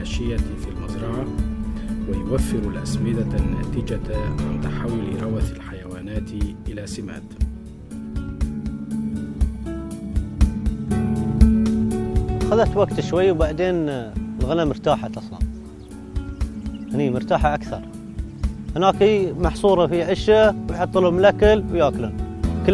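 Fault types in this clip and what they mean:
Nothing stood out on listening, with no audible fault of any kind anywhere in the clip.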